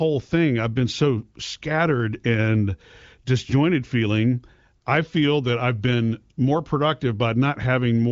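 No technical faults can be heard anywhere in this speech recording. It passes through an AMR wideband (HD Voice) codec, audible as a band limit with nothing above 7.5 kHz, and any coding traces are faint at most, which points to one of the higher rates, around 18 kbit/s.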